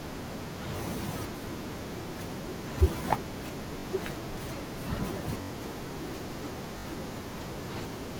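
Repeated buffer at 0.77, 2.03, 3.80, 5.42 and 6.78 s in this speech: each time, a 21 ms slice (fits a 1024-sample buffer) replays one to four times with hard joins. This is heard as brief stutters, as fresh audio arrived late and up to about a tenth of a second was lost.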